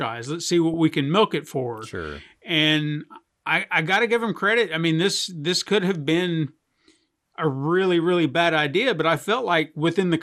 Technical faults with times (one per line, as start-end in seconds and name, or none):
0.00-10.23 MP2 compression
0.74 DAB burbling